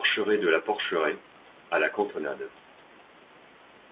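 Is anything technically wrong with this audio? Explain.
No, nothing here is actually going wrong: the speech comes through standard A-law telephone coding, so it sounds exactly as a phone line should, with nothing above 4 kHz and a faint hiss that follows the level of the speech, and that's just how this format behaves.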